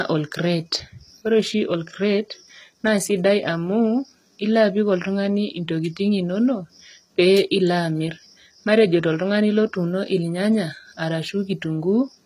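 Throughout the speech, nothing sits above 14.9 kHz, and heavy-compression smearing remains despite the large file. This is likely low-bitrate audio saved at a high bitrate, which fits an HE-AAC source near 20 kbit/s re-encoded as 320 kbit/s MP3. A spectrogram shows a flat ceiling at 14.9 kHz.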